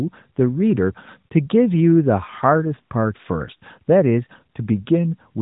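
No faults are present: the speech comes through the AMR narrowband mobile codec as expected, with nothing above about 3.8 kHz and only the light coding texture that points to its highest 12.2 kbps mode.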